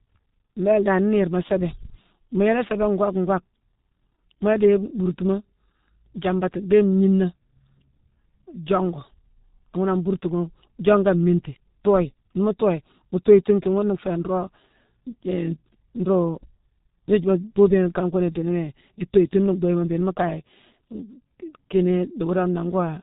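From the first second to the end, the speech carries G.723.1 codec damage, and it is heavy. Nothing reaches above about 3.8 kHz, so the sound is dull and boxed-in. The coder rebuilds the voice from a sparse model refreshed only once per 30 ms frame, which leaves a hoarse, buzzy texture and smears consonants into their neighbours. The degree of damage points to the codec's 6.3 kbit/s mode.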